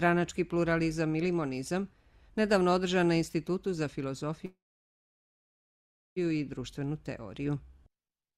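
A call audio freeze runs from 4.45 to 6.18 s. The sound stalls and the final moment is stretched into a brief fading buzz that dies away within about a tenth of a second, followed by roughly 1.6 s of silence. The likely cause is packets held up in transit, draining the jitter buffer. When the audio resumes it picks up exactly where it stopped, so nothing is lost, but everything after is pushed back by 1.71 s.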